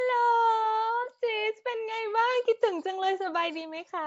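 Nellymoser compression runs throughout this speech: a rough, hissy, underwater smear with nothing above 7.7 kHz, likely from Flash's Nellymoser Asao codec at around 32 kbps.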